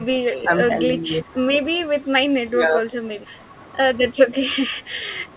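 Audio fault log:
0.40–0.52 s, 0.69–0.75 s, 1.87–2.06 s and 2.50–2.82 s, speech suppressed in double talk: the speech sinks briefly, by about 10 dB at the first and last spots and about 5 dB at the middle two, each dip lasting roughly a tenth of a second, the last closer to a third. It is likely that an echo canceller, hearing both sides at once, mistook this talker for loudspeaker echo and turned it down; the band stops near 4 kHz, as the call codec gives.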